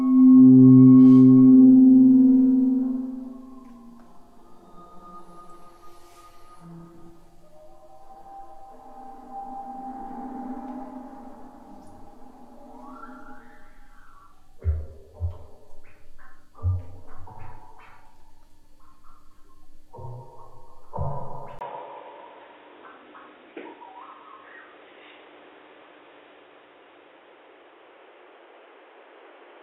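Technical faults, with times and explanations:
21.59 to 29.63 s, input switched to a poorer device: the recording likely moved mid-stream onto a different, narrower input such as another microphone or a headset's call profile. A silence of about 20 ms marks the switch, after which nothing above 3.8 kHz gets through, so the sound turns dull. The level shifts by around 5 dB, and a new background noise appears roughly 40 dB below the signal, carried in by the second device until the end.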